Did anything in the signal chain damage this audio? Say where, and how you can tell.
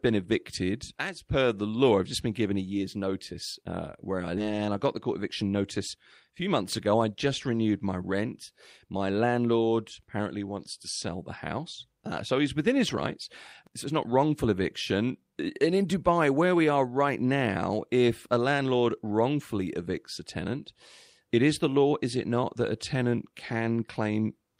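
Yes. A skip ahead in the network or jitter buffer stage at 4.37 s drops roughly 0.7 s of speech. The two sides are butted together without a silent gap, unlike a dropout.

A jitter buffer speed-up follows from 4.47 to 6.48 s. Playback runs about 6% faster at unchanged pitch as pitch periods are trimmed, which distinguishes it from a resampling error.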